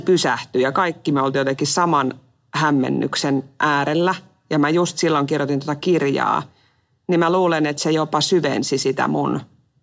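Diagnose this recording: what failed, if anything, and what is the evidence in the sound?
Nothing in the signal chain failed: the speech holds steady, continuous and intact throughout, with nothing audible at any stage from capture to playback.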